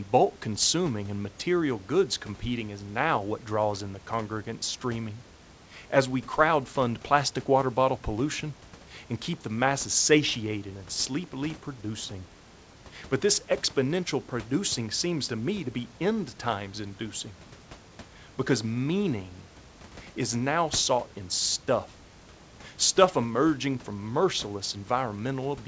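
No technical faults can be heard anywhere in this speech recording.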